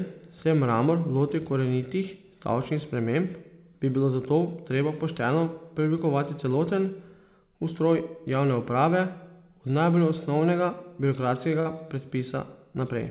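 At 11.60–11.67 s, a burst of packet loss: the last sound is held and faded for 52 ms, then speech resumes with 60 ms missing.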